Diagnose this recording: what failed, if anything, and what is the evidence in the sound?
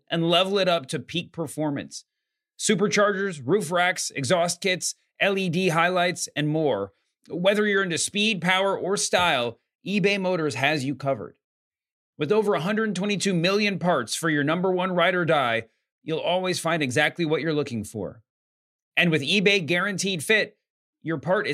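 Nothing failed: the speech holds steady throughout with no dropouts, clicks, level jumps or distortion to point at any stage of the chain.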